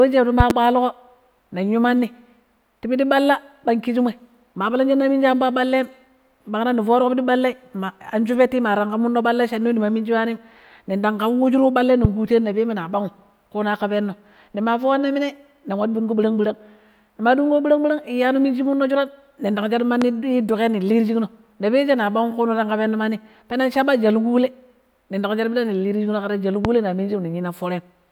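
A voltage step or pulse, likely from a plug, switch, static discharge or driver glitch, entered the signal chain at 0.40–0.53 s and was shaped by the circuits after it. The result is a loud pop, two sharp bursts in quick succession peaking around 15 dB above the speech. The speech continues beneath them.

From 3.92 to 5.42 s, the converter's sample clock wanders by roughly a microsecond RMS, so each sample is taken slightly early or late. Because the error scales with how steeply the waveform is moving, this sample clock jitter produces a faint hiss and roughness about 45 dB below the speech. It is strongest on loud, bright sounds and disappears in the pauses.

The same kind of loud pop returns three more times, each a single burst. At 12.05–12.07 s it peaks around 20 dB above the speech, just before "ƙuteno na peme na". At 20.02–20.04 s it reaches around 15 dB, just before "duƙai ning". 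At 26.65–26.68 s it again reaches around 20 dB.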